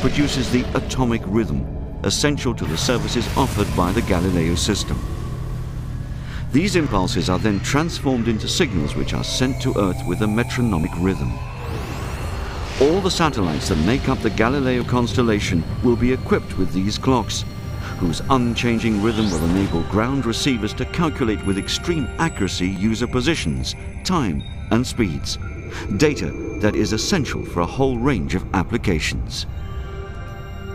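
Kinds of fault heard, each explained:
audio missing between chunks: Skips at 2.89, 6.86, 10.84, 14.81, 18.79, 22.76 and 26.74 s, about every 4 s, each losing roughly 30 ms, likely lost while a recorder switched chunks. The waveform joins directly across with no silent gap, and the spectrogram shows abrupt seams.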